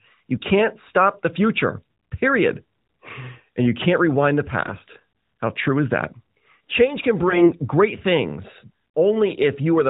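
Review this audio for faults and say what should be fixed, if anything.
AMR bit errors occur at 0.36–0.44 s (just before "stop the future period"), 4.66–4.82 s (after "you can't rewind the") and 7.28–7.53 s (before "great things"). Pitch and level roughly hold, but the sound turns hoarse and gargly. Flipped low-priority bits misplace the excitation pulses and skew the fine gain and spectral values. The bursts last about 80 ms, 170 ms and 250 ms, which fits runs of 20 ms frames. The error rate is heaviest in the last burst, around a tenth of the bits. On a spectrogram, the harmonic striations smear into noisy, blotchy energy below 4 kHz, with no gap. The waveform keeps its envelope and roughly its pitch periodicity. Stronger channel coding or unequal error protection, or better link quality, would prevent it.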